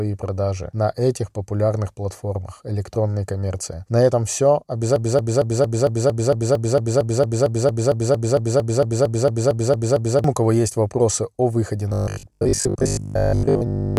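It's a speech clip, and from 4.96 to 10.24 s, just before "у кого есть вопросы", there's a broken-record loop: a 227 ms fragment repeats 23 times, likely a stalled player or stream. Then, after "есть вопросы о выходе", from 11.89 to 13.97 s, it turns into robotic sound from repeated short buffers, a metallic 50 Hz buzz, likely from a 20 ms buffer being repeated while most of the real audio is skipped.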